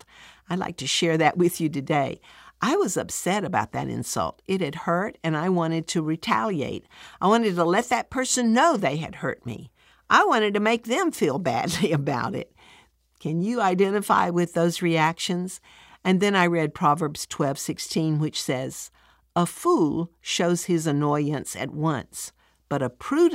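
Nothing in this speech recording points to a technical fault, so there's nothing here to track down.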